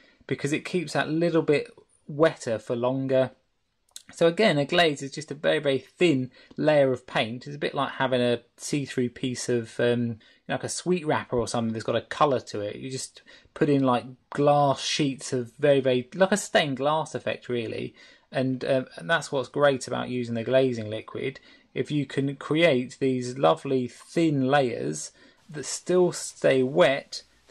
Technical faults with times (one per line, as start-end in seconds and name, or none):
none